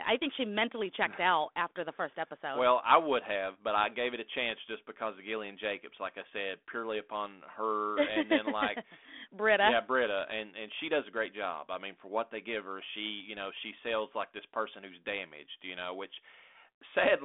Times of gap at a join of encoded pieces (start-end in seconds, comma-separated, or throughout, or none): none